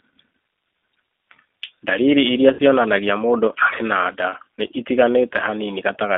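Throughout, the G.729 codec gives a rough, faintly synthetic texture within roughly 250 Hz to 3.6 kHz, which points to an 8 kbit/s model-based coder rather than simple band-limiting.

From 2.53 to 2.61 s, VoIP packet loss concealed by the speech codec stretches the sound into a fading buzzy tone or coloured noise instead of leaving silence, covering about 60 ms, which fits three lost packets.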